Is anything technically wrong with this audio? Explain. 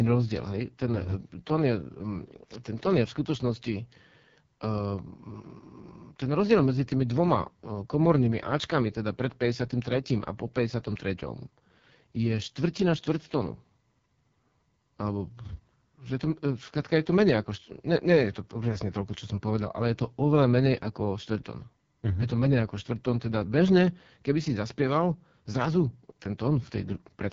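Yes. The whole clip of speech has been through the AMR wideband (HD Voice) codec at a very low rate, which fits 6.6 kbit/s, and it's heavily damaged. At that rate the codec's pulse-driven vocal tract model gets too few bits to describe each stretch of speech, so the voice comes out rough and raspy, with a buzzy, grainy edge. Nothing reaches above about 7.4 kHz, and the top band is filled with shaped noise rather than real detail.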